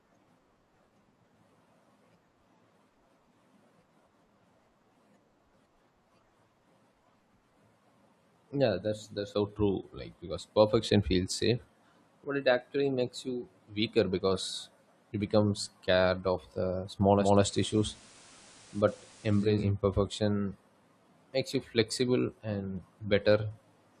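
From 17.09 to 19.68 s the receiver drops its digital signal, digital radio blending to analogue FM over 0.33 s. The speech gains hiss roughly 25 dB down, and shifts about 1 dB in level before returning.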